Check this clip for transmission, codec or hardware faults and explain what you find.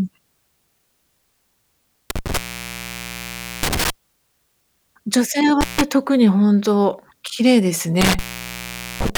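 There's an intermittent contact in this speech, three times: 2.10 to 3.90 s (open about 1.26 s), 5.61 to 5.81 s (about 0.15 s), and from 8.01 s to the end (about 0.82 s). A loose plug or cable briefly breaks the connection, so the sound drops to faint hiss with crackle at each edge.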